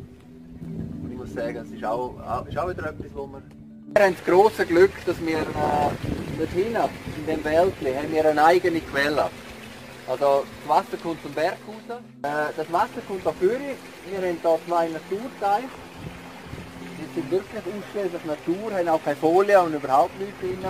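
No technical fault can be heard anywhere in the audio.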